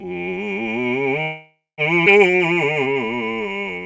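Throughout, a channel delay of roughly 5 ms summed to mono causes comb filtering. Notches start near 100 Hz, making the music hollow and phasey. Unlike a codec's dullness, this is a fixed pattern of cancellations, separate from the clean cutoff at 8 kHz.

From 1.22 to 1.81 s the music stops and is replaced by a fading buzz or hiss, then about 170 ms of silence. It resumes exactly where it left off, with nothing lost. This is likely a call audio freeze, where late packets emptied the jitter buffer. Unlike a dropout, the music resumes without skipping any material.

At 2.05 s a skip ahead jumps forward with almost no gap, losing roughly 300 ms of music. The two sides are spliced nearly directly, the reverse of the freeze's inserted pause.

From 2.32 s to the end, jitter buffer slow-down repeats pitch periods to rebuild its reserve. The music runs at 91% speed, about 142 ms longer, with unchanged pitch. 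This is unlike tape-style slowing, which would lower the pitch.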